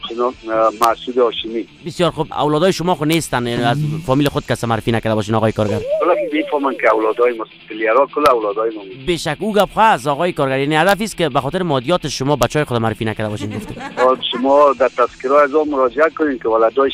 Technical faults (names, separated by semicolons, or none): integer overflow